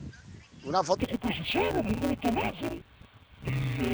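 From 0.97 s to the end, the sound turns dull and robotic: interleaved audio read as planar. Each 5.8 ms block (fitting a 256-sample buffer) has its samples split into half-speed halves, causing a 172 Hz buzz. Unlike a pitch shift, there is no clear octave drop.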